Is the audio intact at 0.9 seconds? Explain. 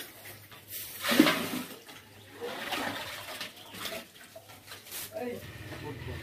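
Yes, at 0.9 seconds the audio is intact, with no fault to be heard at that moment.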